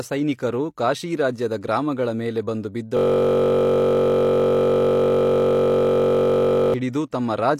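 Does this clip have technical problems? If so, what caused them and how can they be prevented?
Yes. A system hang loop runs from 2.97 to 6.74 s, right after "ಕಾಶೀರಾಜ್ಯದ ಗ್ರಾಮಗಳ ಮೇಲೆ ಬಂದು". The system froze while the hardware kept replaying one 21.33 ms piece of its ring buffer. That fits a 1024-sample buffer. The exact repeats form a steady buzz at 46.9 Hz. To prevent it, keep the driver and system stable and have a watchdog mute output when the buffer stops updating.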